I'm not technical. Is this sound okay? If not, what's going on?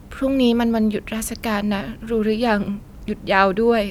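Yes, nothing stood out as a problem when listening to this recording.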